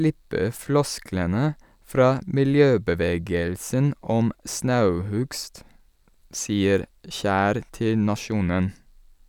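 From 5.08 to 6.32 s, eight CD scratch ticks occur, each only a few milliseconds long, at about six or seven per second. A scratch left the error correction with too much to rebuild on each disc turn, so the player patched the gap. That once-per-revolution regularity separates them from random clicks.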